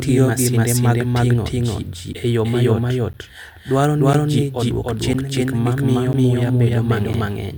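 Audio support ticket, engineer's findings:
Doubled audio track, entire clip: likely a second capture path or edit mixing a copy in about 300 ms late. Full-band echo at roughly equal level, no decay.

Periodic USB or driver dropouts, 2.13–7.14 s, starting after "masinde mag ting'o ji": bus or driver blocked every 1.0 s. Roughly 10 ms silence gaps heard as regular ticks in the speech.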